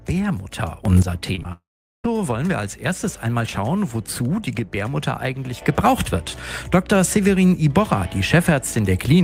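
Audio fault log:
0.85 to 1.02 s: sudden gain jump. The level leaps up by about 12 dB from one sample to the next and drops back at 1.02 s. The sound and its background noise rise and fall together, with no ramp, so each edge snaps rather than swells. That points to a gain setting or bit shift likely applied instantly.
1.35, 1.39 and 1.43 s: short concealed packet loss. Three 20 ms gaps arrive back to back. The receiver fills each by extending the last sound, for 20 ms, 15 ms and 14 ms, then blends into the real audio. The result is a quick run of smears lasting about a tenth of a second.
1.52 to 2.06 s: long network dropout. About 0.52 s of audio never arrives. The receiver first carries the last sound forward as a fading buzz or hiss. After that, about 0.41 s is left near silent. The audio resumes at 2.06 s and skips the missing stretch. A stalled network link is the likely cause.
5.62 s to end: sudden gain jump. 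At 5.62 s the level steps up by about 6 dB in one sample and stays there until the end at 9.2 s. Sound and noise floor rise together, which marks a gain change, likely applied without a ramp.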